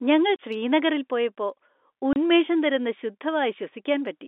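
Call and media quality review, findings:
Packet loss filled with silence: 30 ms dropouts at 0.36 s, just before "ശ്രീനഗറിൽ പോയപ്പോ", and at 2.13 s, consistent with a single lost 30 ms packet each. Jitter buffer/transport inserted silence; flat waveform gaps. G.711 band-limited path intact.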